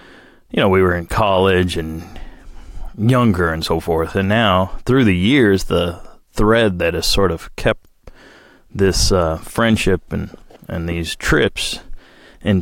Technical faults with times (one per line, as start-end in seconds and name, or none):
none